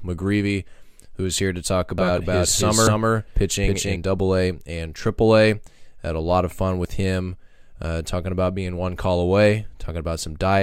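Right after "is here to talk", at about 1.98 s, a doubled audio track kicks in and runs to about 3.96 s. A second full-band copy of the speech sits roughly 0.3 s behind, at about the same level, so everything gets a hard, slapback echo with no room tail, and it switches on and off abruptly. That's likely the signal being captured twice, once through a slower path.

There are also two spots of audio missing between chunks, at about 2.87 s (buried inside the doubled stretch) and 6.85 s, the second landing between "a lot of fun" and "him uh talking about". Each is a tiny skip, a sliver of roughly twenty milliseconds dropped with the edges butted together. Their spacing of about 4 s points to a likely cause: a recorder or processor working in 4-second blocks and losing a bit at each handover.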